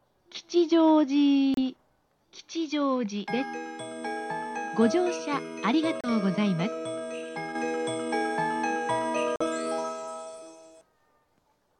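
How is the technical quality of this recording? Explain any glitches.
The recording has three brief gaps. At 1.54 to 1.59 s, 6.01 to 6.09 s and 9.36 to 9.43 s, the sound cuts out, then resumes. These are likely Bluetooth dropouts: packets missed their deadline, so output fell silent. About 30 ms of material is skipped in the first two and 46 ms in the last.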